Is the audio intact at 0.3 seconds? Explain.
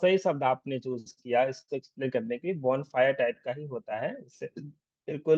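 Yes, the speech at 0.3 seconds is intact, with no fault audible at that moment.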